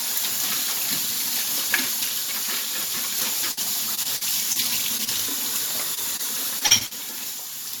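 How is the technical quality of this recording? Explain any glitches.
The recording is degraded by packet loss on the transmission path, in three forms clustered between 3.5 and 7 s.

Burst of packet loss, 3.51 to 3.59 s: a run of packets failed to arrive in time. The receiver extended the last sound for about 55 ms while fading it, then playback jumps ahead, skipping roughly 60 ms of real audio.

Repeated packet loss (robotic sound), 3.95 to 4.57 s and 6.59 to 6.93 s: each span holds four separate gaps, the longest about 40 ms and 42 ms respectively. Each hole is patched with continued sound, so the audio turns choppy. Concealment fills about 17% of the first span and 35% of the second.

Short concealed packet loss, at 4.97 to 5.01 s, 5.05 to 5.09 s, 5.95 to 5.99 s and 6.17 to 6.21 s: about 20 ms of audio went missing each time. The decoder bridged each hole by extrapolating the preceding sound and blending back, leaving a brief smear or wobble.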